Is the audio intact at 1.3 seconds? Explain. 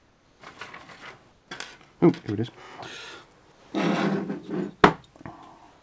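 No. From 1.32 to 1.48 s, about 160 ms of the background is replaced by comfort noise, likely from discontinuous transmission filling a pause with synthetic noise about 4 dB quieter. A spectrogram shows a smooth, featureless band below 8 kHz, and the waveform shows a flat, steady envelope.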